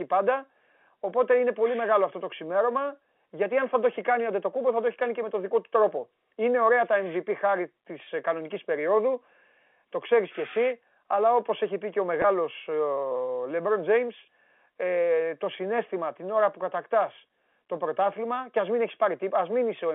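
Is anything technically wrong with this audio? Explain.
Yes. At 8.04 to 8.06 s and again at 12.22 to 12.24 s, the speech briefly turns slightly held and buzzy for about 20 ms, as if one pitch cycle were being sustained before normal sound resumes. This is packet loss with pitch repetition. Each gap fits a single lost 20 ms packet on the G.711 telephone line. The receiver filled it by repeating the last pitch period, so the dropout is too short to reach silence.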